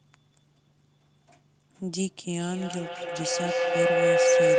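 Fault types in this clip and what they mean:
Feedback howl: from 2.35 s a ringing tone around 500 Hz swells until it sits about 10 dB above the speech, pulsing roughly every fifth of a second, and it is still going when the clip ends. The loudspeaker's output is reaching a microphone on the same call and being sent back around. Each trip adds level, so the loop narrows onto the frequency it favours and beats at its round-trip delay.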